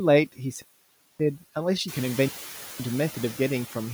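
Noise suppressor artifacts run through the whole speech clip: the steady background is pulled down by about 13 dB between words and returns beneath them, so it pumps audibly. On a spectrogram the noise floor darkens in gaps and refills under speech, most visibly after the room noise rises by about 11 dB near 2 s.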